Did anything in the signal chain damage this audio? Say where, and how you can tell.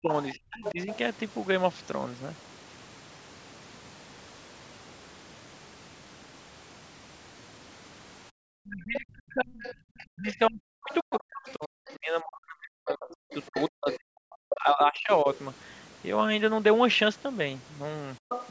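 Yes. Speech suppressed in double talk occurs at 0 to 0.88 s and 8.52 to 15.27 s. The voice drops deeply, around 40 dB, likely from call echo cancellation.

The other side's voice leaking through is audible at 0.23–0.97, 8.95–11.94, 13.09–13.97, 15.34–15.39 and 18.29–18.51 s. It sits well below the speech, likely residual echo.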